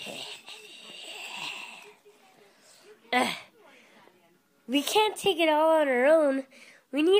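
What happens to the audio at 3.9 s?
Nothing goes wrong at 3.9 s; the audio plays through that moment intact, with no dropout, click or distortion.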